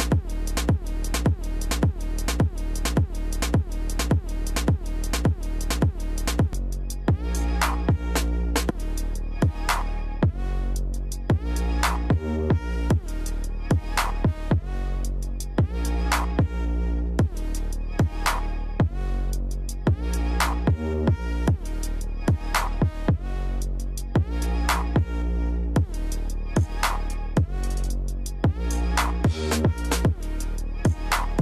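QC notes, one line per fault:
0.00–6.53 s, broken-record loop: already under way when the clip opens, a 0.57 s fragment repeats exactly and back to back about ten times. The likely cause is a stalled player, encoder or stream re-sending the last piece it held, so the audio meant for this span is gone.
8.69 s, damaged data in a compressed stream: a brief chirp or blip. Corrupted bytes in the compressed data made the decoder misread or reject the frames there, lose sync and skip forward to the next frame header.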